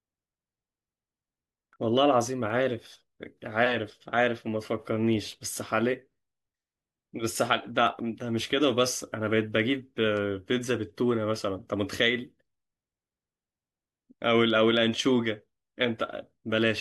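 From 0.2 s to 16.3 s, word clock ticks sound through the speech at a steady rate of roughly one every 0.7 s, about twenty in all. The receiving device runs on its own clock, a few tens of ppm off the sender's, so each time the two drift a full sample apart one sample is dropped or repeated. Each tick shows as a one-sample spike on the waveform and a thin broadband vertical line on the spectrogram.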